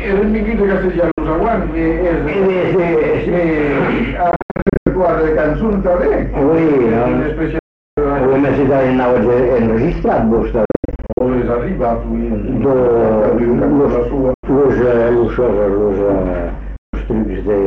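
Abrupt silent holes cut the sound at 1.11–1.21 s, 4.31–4.90 s, 7.59–7.98 s, 10.65–11.21 s, 14.34–14.47 s and 16.76–16.95 s, with the sound picking up each time as if it had kept playing. These are likely Bluetooth dropouts, where late packets were discarded before reaching the headphones.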